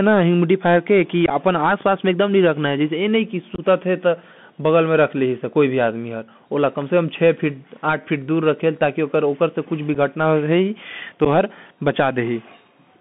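Throughout, the speech carries the Bluetooth CVSD headset codec: a one-bit delta coder whose adaptive step cannot track fast, loud high content, so sibilants rasp and peaks distort audibly; the band stops near 3.5 kHz, and a grainy hiss sits underneath, consistent with a 64 kbps CVSD link.

Unconcealed Bluetooth headset packet loss follows at 1.26 s (about 26 ms lost across 45 ms) and 3.55 s (26 ms across 30 ms), then at 9.95 s (7.5 ms) and 11.25 s (11 ms). Dropped voice packets leave abrupt gaps.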